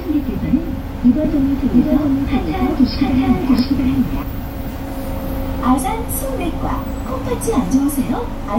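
From 1.25 s to 4.23 s the sound carries a doubled audio track: a second, full-band copy trails the original by roughly 0.7 s at about the same level, with no decay or room colour, so every event is heard twice. It likely comes from a second capture path or an edit holding two copies out of step. On a waveform each transient reappears as an equal twin; a spectrogram shows the whole pattern shifted rightward, cutting in and out abruptly.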